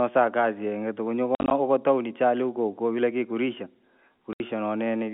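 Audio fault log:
1.35–1.51 s and 4.33–4.40 s, packet loss filled with silence. Lost packets were replaced by silence, chopping the speech with hard edges. After "kazi yingi tuku yunyu", 100 ms drops out in scattered holes up to 50 ms, ending before "tuwni chali". Later comes one 70 ms hole. The gap sizes fit 10 ms packets.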